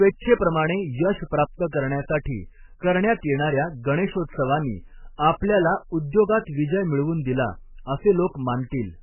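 Throughout, the speech is dull above 3 kHz and sounds watery and swirly, likely from heavy MP3 compression at a very low bitrate near 8 kbps; the flickering tones distinguish it from a simple low-pass filter.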